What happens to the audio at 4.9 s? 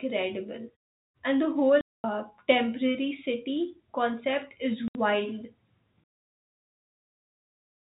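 Right after "concept is", packet loss filled with silence cuts a 70 ms hole (4.88–4.95 s) mid-speech; unlike a muted pause, its edges are abrupt.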